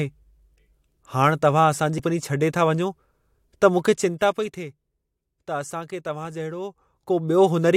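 At 1.98 s, between "हाणि तव्हां असां जी" and "छॾे था वञो", damaged data in a compressed stream causes a brief glitch. The decoder loses sync.

From 3.90 to 4.65 s, zipper noise appears. The level drops by roughly 10 dB in coarse unsmoothed steps, about fifty per second, producing a fine ticking. From 6.53 to 7.51 s, the same zipping returns as the level rises by roughly 10 dB.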